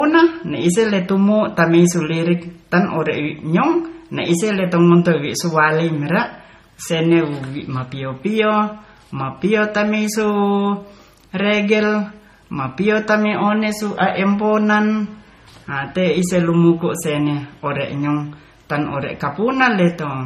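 Speech passes through a likely case of transcoding between lossy codecs from start to finish. A low-rate MP3 encode, around 32 kbit/s by the sound, was re-encoded as Vorbis at a similar rate. Nothing remains above 15.1 kHz, and both codecs' artefacts are audible together.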